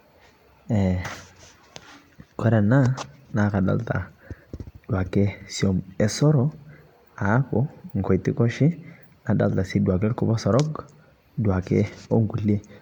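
Throughout the speech, a swirly, hollow smearing blurs consonant attacks, with nothing above 19.9 kHz. Unlike a single low-bitrate encode, the damage sounds heavier than a 128 kbit/s MP3 should, which likely points to generation loss from around ten re-encodes.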